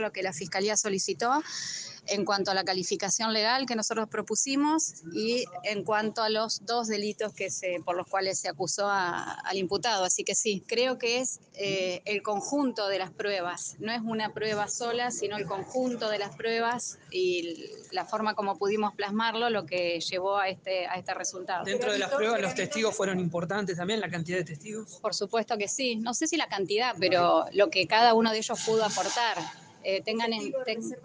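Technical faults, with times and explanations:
26.96 to 28.28 s, sudden gain jump: the level steps up by about 6 dB at once, then drops back. The sound and its background noise rise together. No fade smooths it. A gain setting was likely applied sample-to-sample without a ramp.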